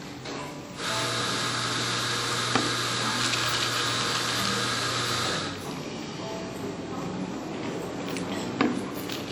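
Throughout, the sound rings and smears, with hiss that breathes alongside it, likely from WMA compression near 48 kbps. Nothing reaches above 20.1 kHz.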